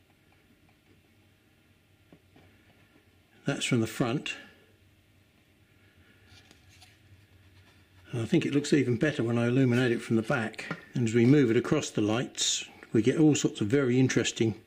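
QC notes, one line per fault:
No technical faults can be heard anywhere in the signal.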